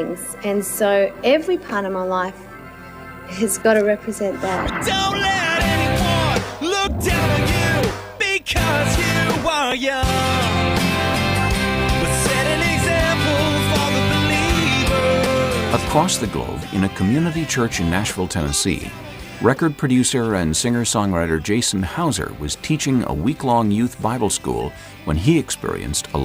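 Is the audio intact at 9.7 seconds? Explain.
No. At 9.71 s there is damaged data in a compressed stream: corrupted bytes make the decoder misread those frames, lose sync and hunt for the next valid frame header. The result is a brief blip or chirp lasting about 10 ms.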